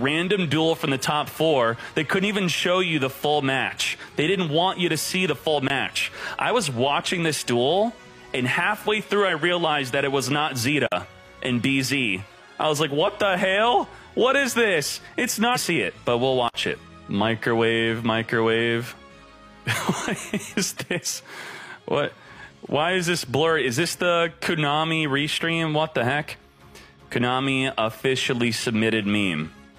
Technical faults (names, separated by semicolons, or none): block of digital silence; stream segment skipped